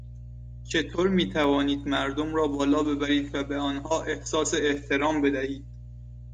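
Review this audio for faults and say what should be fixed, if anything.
Mains hum runs through the whole recording. A ground loop or a nearby transformer is coupling the 60 Hz power line into the signal path, so a steady low tone at 60 Hz, with some low harmonics, sits under the speech at about 15 dB below it. It never stops, so it is also there in the pauses. To prevent it, break the ground loop with a single grounding point or a ground-lift or isolation transformer, and route signal cables away from power supplies.

Clock drift buffer slips show up as short, regular clicks starting at 0.34 s and recurring about every 1.1 s until 5.85 s, around seven in all. The likely cause is two devices running on separate clocks that differ by something like 150 ppm. The buffer between them slowly fills or drains until a few samples are dropped or repeated, and each of those jumps breaks the waveform and clicks over the speech. 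To prevent it, lock both devices to one shared word clock, or insert an asynchronous sample-rate converter between them.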